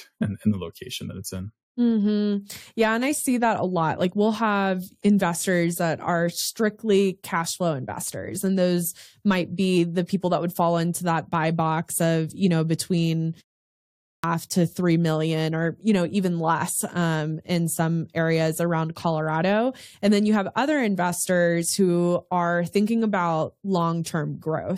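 A clipped start after a pause occurs at 13.70 to 14.24 s. After the short gap of about 0.36 s following "of you know between", the output path appears to have dropped into an idle state and needed time to wake before passing sound again. About 540 ms of the returning speech never reaches the output, so the next phrase bursts out of silence already underway, its opening sounds missing, before "to three million or" continues.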